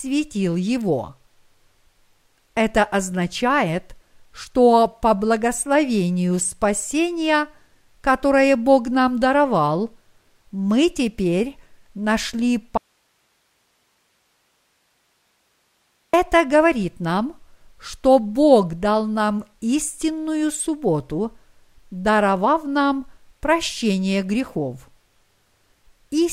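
At 12.78 s the speech cuts out abruptly and stays gone until 16.13 s, an audio dropout to a faint residue lasting about 3.4 s. Only low hiss remains, roughly 45 dB below the speech, likely from the signal feed breaking while the downstream path stayed live.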